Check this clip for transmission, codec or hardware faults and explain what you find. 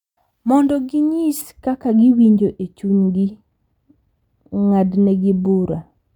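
One fault is present: de-emphasis applied wrongly, from 1.42 s through to the end of the speech. A treble-cutting filter meant to reverse pre-emphasis has been applied where no boost existed, or applied twice, so the highs are rolled off on a smooth downward slope, reaching about 11 dB down at 10 kHz relative to 1 kHz. The voice turns dull and muffled, with softened sibilants. On a spectrogram, the upper bands fade gradually from 1.42 s. In the waveform, edges look rounder.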